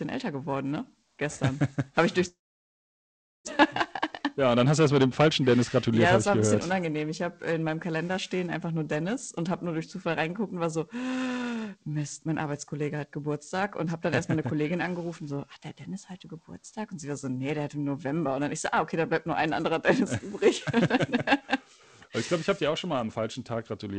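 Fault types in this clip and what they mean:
periodic clock jitter: A steady rough, metallic edge on all sound, from sidebands spaced around 700 Hz either side of each component; it disappears during silence.
long network dropout: From 2.28 to 3.61 s the sound trails off into near silence, then returns with about a second missing, likely from a long break in arriving packets.
jitter buffer speed-up: Between 4.38 and 6.76 s the audio runs about 6% fast at unchanged pitch, sounding hurried as roughly 150 ms is trimmed away.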